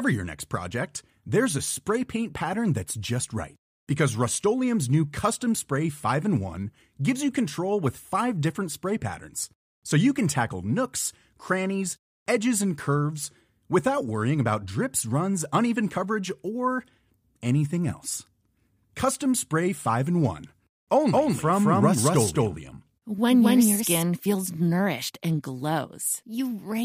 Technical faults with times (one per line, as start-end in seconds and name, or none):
21.11-24.03 doubled audio track